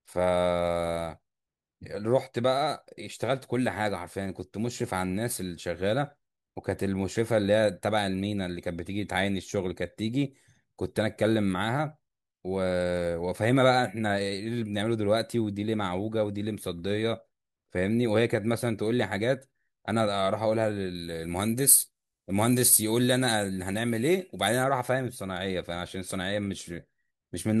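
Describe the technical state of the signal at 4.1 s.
At 4.1 s the speech signal is intact, with no audible fault at that moment.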